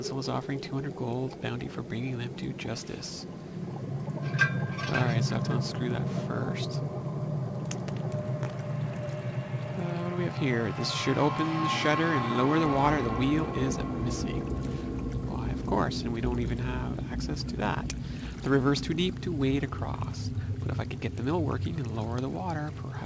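No technical faults can be heard anywhere in the audio; the signal holds steady throughout.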